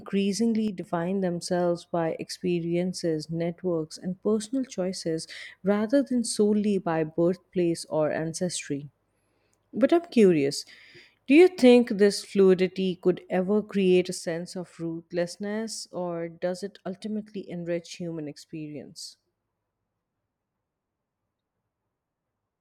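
Speech that twice drops abruptly by about 6 dB, from 0.68 to 0.84 s and from 14.18 s to the end. The likely cause is that one channel drops out before the mono sum. The instant step, with no fade or tonal shift, separates this from a gain ride.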